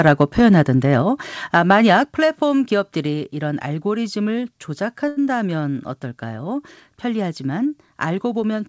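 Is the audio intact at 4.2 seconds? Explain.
Yes, the speech at 4.2 seconds is intact, with no dropout, click or distortion at that moment.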